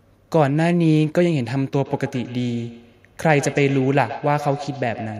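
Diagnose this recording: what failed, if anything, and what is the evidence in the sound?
Call processing failed: feedback echo between two devices. From 1.76 s to the end, the speech returns at a steady interval of roughly 150 ms, peaking about 14 dB below the direct sound. A second device nearby replays it, and the echo canceller here cannot remove it.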